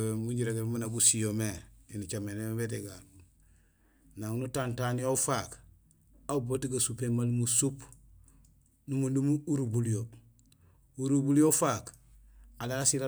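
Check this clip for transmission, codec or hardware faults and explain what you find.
No faults of any kind can be heard anywhere in this speech recording. Nothing in it calls for a technical explanation.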